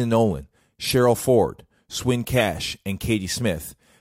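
Speech with two short chirpy bursts at 0.84 to 0.94 s and 2.33 to 2.40 s, a corrupt frame decoded each time, where garbled codec data lands energy at the wrong frequencies for a few frames, fairly loud.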